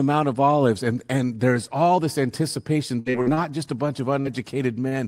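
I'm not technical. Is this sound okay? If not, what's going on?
No, the speech has three network glitches. From 2.99 to 3.40 s, right after "there's all this anticipation", there is repeated packet loss, which gives a robotic sound. Four separate chunks of audio went missing in quick succession, the longest about 66 ms. Each time, the receiver papered over the hole by continuing the last sound it had. Nearly half of that stretch is patched rather than real, so it comes across as choppy and robotic before "just a bunch of" arrives.

At 4.21 to 4.28 s, just after "just a bunch of", there is a short concealed packet loss. About 40 ms of audio never arrived in time. The receiver filled the gap with a brief continuation of the preceding sound and then blended back into the real signal. You hear a quick smear or wobble, and a short sound in that spot can drop out entirely.

At 4.89 to 4.95 s there is a short stall from a late packet. 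Here nothing was lost. A piece of audio simply arrived about 30 ms late, and the playback buffer briefly ran dry. To cover the wait, the receiver held the last sound a little longer, then picked up exactly where it left off. The result is a sound that lingers a touch too long, with a faint buzz or dip.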